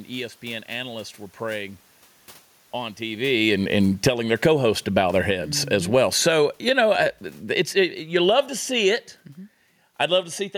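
Automatic gain falling runs from 3.33 s to 9.11 s. The gain control judged its input too loud, or the background too strong for its starting gain, and lowered its gain by about 13 dB over nearly six seconds. The speech sinks steadily in level, and the room noise sinks with it. That shared drop sets it apart from the talker's movement around 3 s, which changes only the voice.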